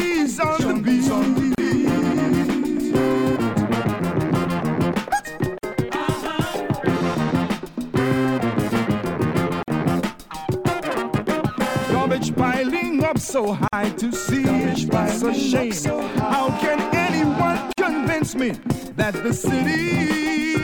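Short dropouts of silence cut into continuous sound at 1.55 s (34 ms), then 5.58, 9.63, 13.68 and 17.73 s (49 ms each), every 4 s. These are gaps at a join of encoded pieces, where separately encoded segments were spliced with encoder delay and end padding left in.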